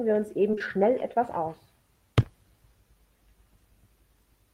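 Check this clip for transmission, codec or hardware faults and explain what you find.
One fault appears: short concealed packet loss, three times back to back, at 0.51 to 0.55 s, 0.55 to 0.59 s and 0.59 to 0.62 s. Each time 20 ms of audio arrived too late. The receiver stretched the preceding sound for 14, 19 and 12 ms, then blended back. The result is a short smeared wobble.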